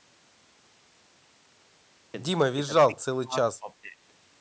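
Between 2.67 and 2.96 s, 3.18 and 3.36 s, and 3.59 and 3.97 s the speech sinks in level in uneven pieces, about 10 dB down at first, then about 25 dB, then about 15 dB. This is likely speech suppressed in double talk, with the echo canceller mistaking overlapping sound for echo. The level ducks, without the clean silent gaps of dropped packets, and the call band still stops at 8 kHz.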